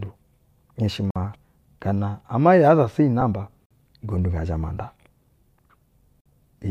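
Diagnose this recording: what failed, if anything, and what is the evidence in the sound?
Playback stage: gap between chunks. Hard-edged 50 ms silences at 1.11, 3.66 and 6.21 s repeat every 2.5 s chunk. Sound is delayed, not lost, unlike a dropout.

Codec stage: lost LE Audio frames. A brief noisy smear at 3.21 s, fitting one 10 ms frame, where LC3 concealment reused the prior spectrum. It is filled with noise, not silent.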